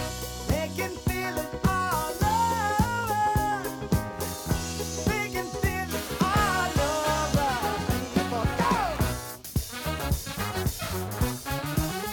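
From 0.91 s to the end, the audio carries crude rate conversion: a gritty, inharmonic fizz that follows loud and high-frequency content. It fits a 48 kHz to 44.1 kHz change made by dropping samples unfiltered, leaving a patterned error roughly 20 dB below the signal.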